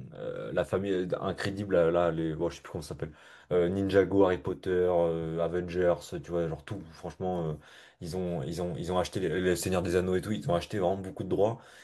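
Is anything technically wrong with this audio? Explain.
Yes. From 8.27 s to the end at 11.84 s, the speech has pre-emphasis left on. The treble boost applied before storage or transmission was never undone by the matching de-emphasis, so high frequencies stay lifted, by about 8 dB at 10 kHz relative to 1 kHz, which fits the CD 50/15 µs curve. The speech turns thin and bright there, with sharpened, exaggerated sibilance.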